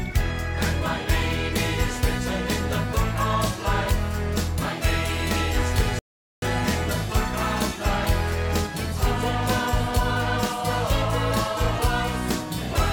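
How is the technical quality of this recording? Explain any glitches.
The recording has one clear glitch, a playback stall from 5.99 s to 6.42 s. The sound cuts out mid-flow and the output goes completely silent for about 0.43 s before resuming. The likely cause is that the player ran short of buffered data, or its audio thread was briefly blocked, so nothing reached the output until it recovered and carried on.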